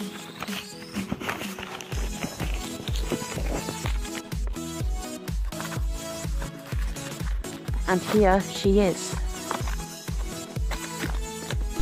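Nothing here to flag, as the audio runs its whole length without a single technical fault turning up anywhere along the way.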